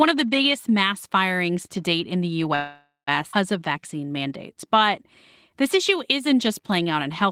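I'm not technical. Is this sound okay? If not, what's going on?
No, there are three kinds of problem here, all typical of a speech call over an unsteady internet connection.

Call audio freeze, 2.55 to 3.09 s: the sound stalls for about half a second. The likely cause is that pieces of the call were held up in transit, so the receiving phone ran out of audio to play. It stretched out the last bit of sound, which fades away and ends in roughly a tenth of a second of silence. When the delayed audio arrived, it carried on where it had stopped, so nothing is lost; a pause was simply inserted.

Skip ahead, 3.31 to 3.35 s: here the opposite happens. About a third of a second of speech was thrown away, because newer audio was already waiting and the phone jumped to it to catch up. The two sides of the missing piece are joined almost directly, with only a tiny bridge in between, so the speech leaps forward and that part of what was said is simply gone.

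Jitter buffer slow-down, 3.59 to 5.04 s and 5.50 to 7.23 s: the phone was building up a small reserve of audio so it wouldn't run dry again. It did this by repeating tiny slices of the sound many times over. The speech plays slower but at the same pitch: about 92% of normal speed in the first stretch, adding 0.13 s, and about 94% in the second, adding 0.11 s. Sounds come out drawn out.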